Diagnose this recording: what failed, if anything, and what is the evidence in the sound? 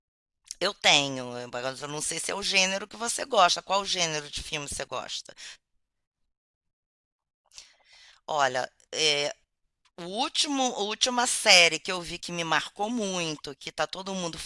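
Nothing failed here: the recording gives no evidence in the sound of any fault.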